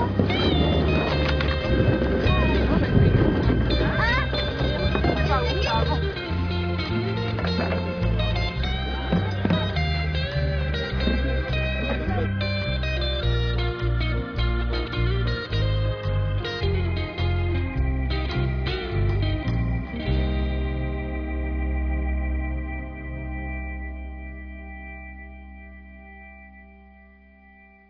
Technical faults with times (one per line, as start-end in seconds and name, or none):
none